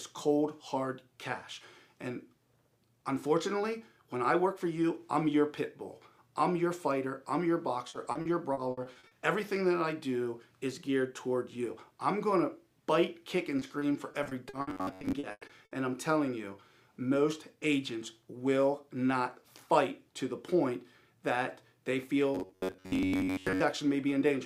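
From 7.89 to 9.13 s there is repeated packet loss (robotic sound). Nine gaps of up to 60 ms are each filled by extending the preceding sound, so about a quarter of the stretch is concealed and it turns choppy. The same fault returns from 13.59 to 15.73 s, this time with thirteen gaps of up to 100 ms. Within that stretch, from 14.70 to 15.13 s, and again from 22.35 to 23.62 s, the sound becomes a rigid, metallic 93.8 Hz buzz. This is robotic sound from repeated short buffers: most of the audio is likely an 11 ms block replayed over and over while fresh audio is skipped.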